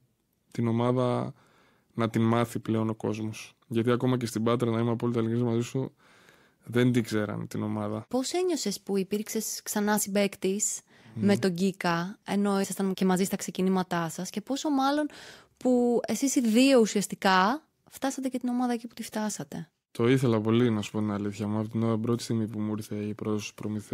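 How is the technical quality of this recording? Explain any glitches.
No technical faults or glitches turn up anywhere in this speech recording.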